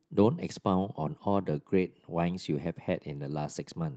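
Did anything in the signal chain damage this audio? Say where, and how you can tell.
Yes, at the jitter buffer: clock drift between sender and receiver. The sender's clock runs about 3% slow, so the buffer keeps draining. The mismatch is one-directional, unlike random network jitter.

Repeated timing corrections run from 0.02 to 3.83 s. Short repeated slivers add roughly 150 ms, slowing the pace to 97%. The hiccups are small and unevenly spaced, not the gaps of packet-loss concealment.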